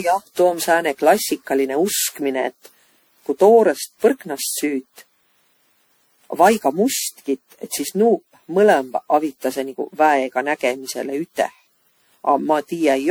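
Generation loss runs throughout this speech clip: it sounds swirly, smeared and hollow, with blurred attacks. The likely cause is around fifteen MP3 decode and re-encode passes, fitting a 96 kbit/s chain, each quantising on a shifted frame grid so noise and spectral holes accumulate.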